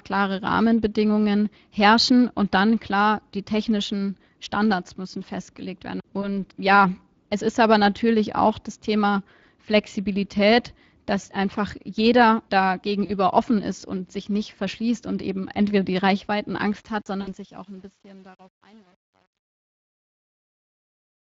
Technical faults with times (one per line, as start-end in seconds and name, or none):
0.00-21.31 Speex codec
6.21-6.28 VoIP packet loss concealed by the speech codec
11.21-11.25 VoIP packet loss concealed by the speech codec
13.05-13.11 VoIP packet loss concealed by the speech codec
16.58-21.31 truncation distortion on a fade
17.21-17.31 VoIP packet loss concealed by the speech codec